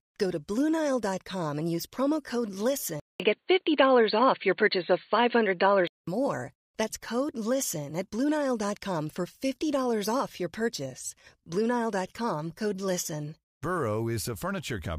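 Speech, with the input likely switched to a poorer device from 3.00 to 6.07 s. A 200 ms silence marks the change, after which the band stops near 4.5 kHz, the tone turns dull and boxy, the level shifts by roughly 5 dB, and a faint new noise floor appears.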